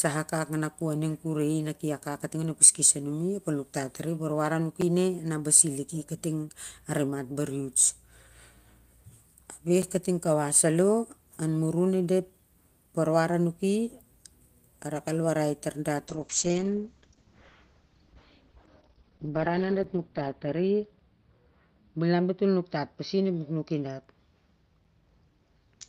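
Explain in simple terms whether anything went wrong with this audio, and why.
Gap between chunks at 4.81 s (between "nuktat tari ep warwar" and "ne na basi"), 9.82, 14.83, 19.84 and 24.84 s. The speech was handled in 5-second pieces, and a tiny 7 ms silence slipped in at each join, heard as a brief, sharp hole.

Call bitrate drop from 16.09 s, just after "al warai tar dat", to the end. The connection signalled less available bandwidth, so the encoder squeezed the speech into far less data. Sound above 6 kHz was cut off, making the voice muffled and rough.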